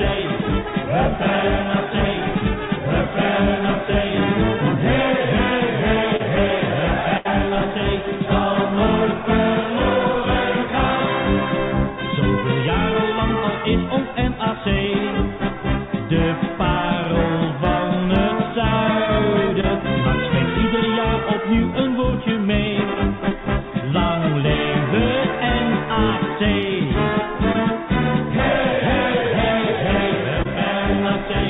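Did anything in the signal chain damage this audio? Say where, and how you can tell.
Yes, at the network stage. Short concealed packet loss appears at 6.17–6.21, 19.61–19.65, 27.52–27.61 and 30.43–30.47 s. Each is a brief smear or wobble where about 20 ms never arrived and the receiver extrapolated the preceding sound for roughly 20–30 ms before blending back. At 27.5 s a few extra milliseconds are inserted.

A burst of packet loss at 7.17–7.27 s is longer. About 80 ms went missing, and the receiver held and faded the last sound for 73 ms, giving a buzz or hiss. Playback then resumes past the gap, against the G.711 call path's 4 kHz band limit.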